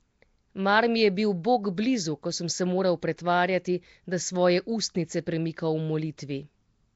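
From start to finish the speech carries a rough, hissy halo and a smeared, underwater quality, with nothing above about 7.7 kHz. The damage is plainly audible and points to Nellymoser compression at a rate around 32 kbps, likely from Flash's old microphone codec. Blocks coded with few bits leave weak bands filled with substituted noise. That steady grainy hiss marks it apart from MP3 or AAC artefacts, whose damage tends toward swirling, chirpy warble.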